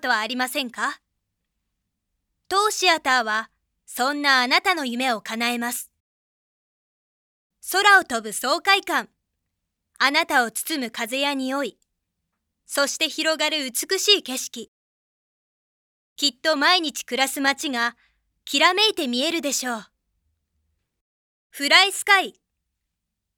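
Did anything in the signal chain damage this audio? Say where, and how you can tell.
No, nothing stood out on listening that would point to damage at any stage of the signal chain.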